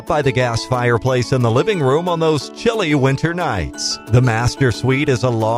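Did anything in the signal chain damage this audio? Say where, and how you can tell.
No, nothing in the signal chain audibly damaged this audio. No stage, from capture to playback, leaves a mark that can be heard anywhere in the clip.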